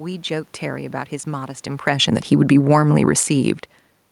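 From 1.72 to 3.3 s the automatic gain falls about 6 dB, backing off input it judged too loud or too noisy, so the speech and room noise sink together.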